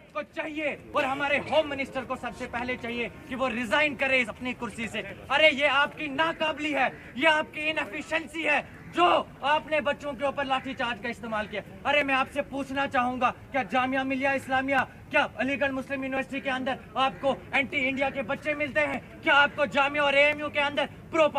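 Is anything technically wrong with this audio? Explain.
Yes. From 0.94 s to 20.33 s there's a click roughly every 1.38 s, around fifteen in all. That steady rhythm points to clock drift buffer slips, likely two devices whose clocks disagree by something like 700 ppm, so the buffer between them periodically drops or repeats a block of about 50 samples.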